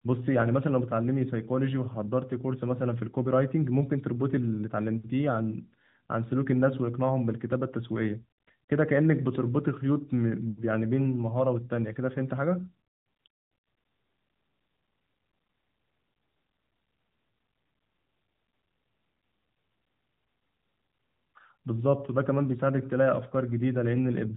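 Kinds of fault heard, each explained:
No faults are heard in the speech. The speech passes through an AMR narrowband mobile codec with light coding damage and nothing above about 3.8 kHz, which fits the codec's 12.2 kbps mode.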